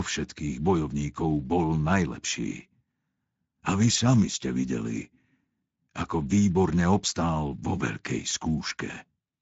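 Throughout the speech, Speex codec damage is plainly audible. Too few bits for the excitation make it hoarse and noisy, which fits a setting around 17 kbps. Nothing remains above 7.7 kHz.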